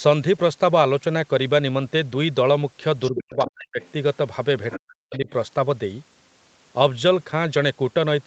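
From 3.06 to 3.5 s, other side's voice leaking through: the echo canceller likely left loudspeaker sound in the microphone signal, so a second voice is heard roughly 10 dB under the talker. From 3.1 to 3.81 s comes speech suppressed in double talk: with both sides active, the canceller likely turned everything down, and the talker's voice drops steeply, by around 40 dB at its deepest. A very faint scrap of leaked voice follows at 3.81 to 3.91 s, and another, somewhat louder, at 4.71 to 4.78 s. The talker is suppressed again from 4.77 to 5.28 s, dropping by around 40 dB at its deepest for about half a second.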